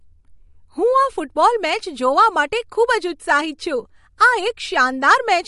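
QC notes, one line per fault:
throughout, MP3 compression: watery, swirly speech with treble cut off above 11.2 kHz, likely from a heavily starved MP3 encode, which fits about 48 kbps.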